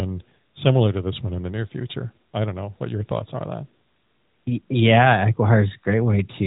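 No technical faults are audible.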